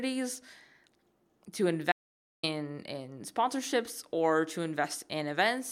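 At 1.92 s the speech cuts out abruptly and doesn't return until 2.43 s, so about half a second simply vanishes. That's an audio dropout to silence: the gap is silent, with no room tone or hiss underneath, which is why it sounds like a hole rather than a pause. The likely cause is the input dropping away for a moment, through a link hiccup, a device losing contact or a brief mute, while the recorder kept writing silence. Whatever was said in that stretch is gone.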